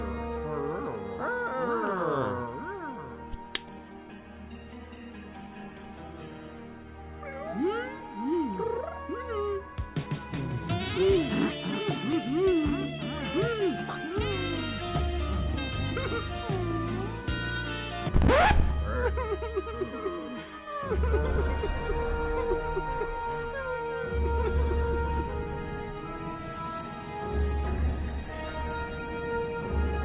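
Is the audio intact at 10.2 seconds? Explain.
No, a skip ahead at 10.06 to 10.21 s drops nearly half a second of audio, and playback jumps straight to later sound already waiting in the buffer.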